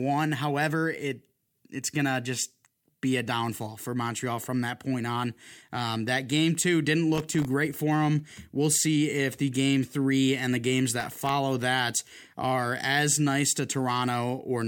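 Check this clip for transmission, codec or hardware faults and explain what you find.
Processor overload crackle appears twice in this speech, at 7.15–7.45 s after "that game two didn't" and at 11.00–11.29 s after "three and the games." Each time, very short buffers, apparently under a millisecond, repeatedly missed their deadlines and were filled with silence, producing a gritty burst of crackle over the voice.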